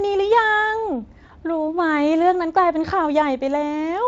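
At 1.27 s the speech briefly stretches into a buzzy tone or coloured noise that dips in level for about 40 ms. This is VoIP packet loss concealed by the speech codec: one 20 ms frame went missing, and the Speex decoder filled the gap by carrying its last pitch and filter forward at falling gain before recovering.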